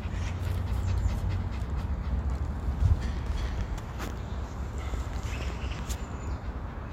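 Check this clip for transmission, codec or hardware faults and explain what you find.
Nothing faulty can be heard anywhere in this recording.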